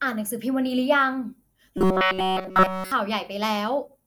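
A speech recording in which, from 1.78 to 2.92 s, the voice collapses into a rigid, metallic buzz pitched at 188 Hz that only loosely tracks the words. This robotic sound from repeated short buffers likely comes from audio arriving too seldom, so the whole stretch is filled by looping a roughly 5.3 ms slice.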